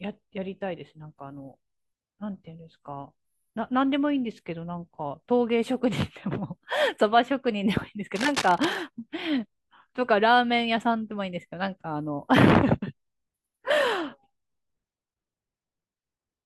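A speech recording with a burst of cable scratch noise from 8.15 to 8.76 s. Dense, uneven scratching and rustling sits over the speech, roughly 10 dB below it. The likely cause is a worn cable or connector being moved, making its contact resistance jump rapidly.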